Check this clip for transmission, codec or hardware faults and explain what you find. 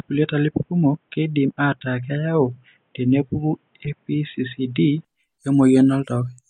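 Two faults turn up in this speech clip: a band-limited stretch from the start that points to a device change, and a short corrupted-frame burst inside it.

From 0.0 to 5.05 s the speech is dull and boxy, with nothing above 3.8 kHz and a faint added noise floor roughly 45 dB below the signal. At 5.05 s the full bandwidth returns with no gap and no level jump. The likely cause is the input switched to a poorer device, such as a headset's call profile, whose narrow passband and own self-noise govern the first five seconds.

From 3.85 to 3.89 s there is a brief burst peaking at about -20 dBFS. This is a corrupt frame decoded as if valid. Flipped bits in the compressed data made the decoder apply wrong gains or misread spectral codes, placing energy at frequencies that don't belong to the speech. The roughly 40 ms duration fits about two damaged frames.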